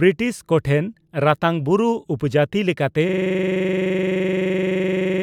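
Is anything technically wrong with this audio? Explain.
Yes. From 3.09 s to the end, the speech gives way to a system hang loop. The system stalled while the audio hardware kept replaying the same stretch of its ring buffer. A 42.67 ms slice, which fits a 2048-sample buffer, repeats about 50 times at 23.4 Hz, making a rapid, rattling stutter. On a waveform it looks like identical blocks tiled edge to edge. On a spectrogram it shows as frozen content broken by vertical stripes at that rate.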